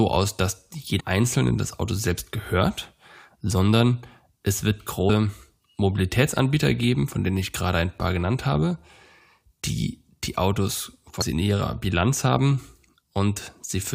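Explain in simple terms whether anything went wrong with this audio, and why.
Three brief blips, at 0.99 s after "aus dass", 5.09 s after "gehört sondern es wird", and 11.21 s before "in ihrer", come from damaged data in a compressed stream: the decoder hit corrupted bytes and lost sync.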